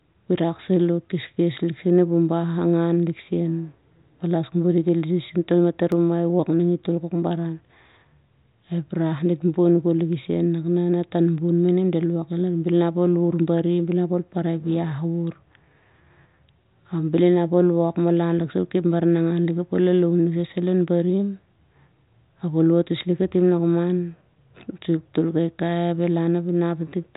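CD scratch ticks run from 5.92 to 6.41 s, ending just before "ning i tol": three brief clicks, the longest around a millisecond, where a surface blemish defeated error correction on successive disc turns and the player patched the lost samples. The band-limited G.726 sound, nothing above 3.8 kHz, carries through.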